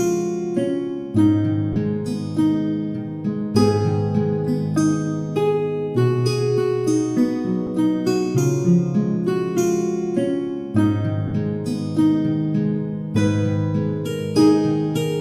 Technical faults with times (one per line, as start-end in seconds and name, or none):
1.73-1.76 lost LE Audio frames
7.67 lost LE Audio frames
11.28-11.32 lost LE Audio frames